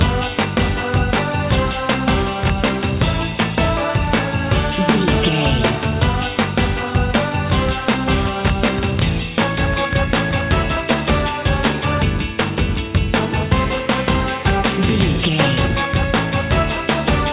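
No dropouts, clipping, timing errors or level jumps turn up anywhere in the recording.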